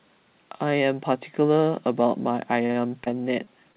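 From 2.66 s to 3.76 s the call suffers repeated packet loss: seven gaps, the longest 41 ms, each patched by extending the previous sound, covering 13% of the span. The speech turns choppy, with short pieces missing, over band-limited audio with nothing above 4 kHz.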